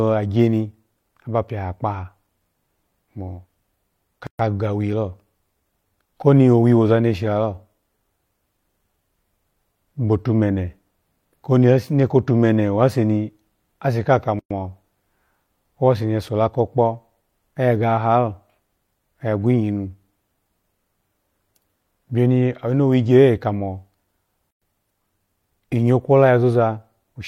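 Speech with a gap at a join of encoded pieces at 4.27–4.39 s, 14.39–14.51 s and 24.51–24.62 s, silences of 126, 112 and 112 ms recurring every 10 s. Unlike a dropout, nothing is lost: separately encoded pieces' untrimmed delay and padding open silence, then speech resumes exactly where it stopped.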